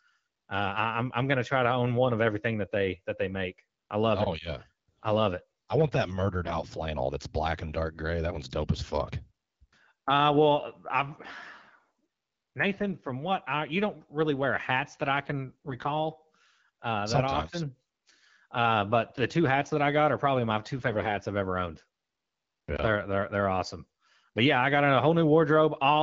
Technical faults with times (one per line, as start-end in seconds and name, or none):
6.44-6.53 AMR bit errors
15.49-15.94 AMR bit errors